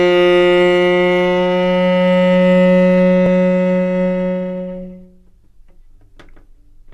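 A recording of everyday sound with one overlap between stream segments, heard as a tiny skip at 3.26 s. The audio is delivered in 2 s segments, and at this boundary the time stamps of adjacent segments overlap. The player discards the overlapping portion, but that sound was never actually duplicated, so about 5 ms of real audio is removed. The waveform on either side no longer lines up, and that discontinuity produces the brief click or skip.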